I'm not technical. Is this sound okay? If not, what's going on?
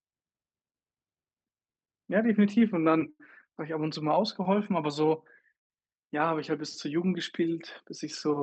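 No. At about 3.10 s there is a short stall from a late packet. During the call, one chunk of audio arrived late, and the receiver's small waiting store of sound ran empty. To cover the gap, it stretched the last bit of speech for about 0.09 seconds until the chunk showed up, then carried on from the same point. Nothing is lost, but one sound around 3.10 to 3.21 s is held a little too long, with a faint buzz or dip.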